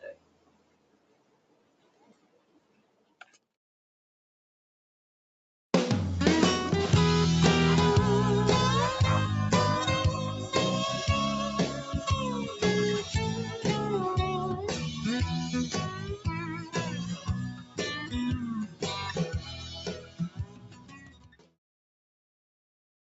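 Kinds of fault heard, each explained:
Noise suppressor applied to music or sounds: held sound and tails pump and thin throughout, with level swinging by around 20 dB, because a speech-tuned suppressor treats steady content as noise.
Sound cut by the noise suppressor: sustained passages sink by up to about 14 dB, most clearly from 0.14 to 3.44 s and 19.33 to 21.57 s, as the suppressor clamps them.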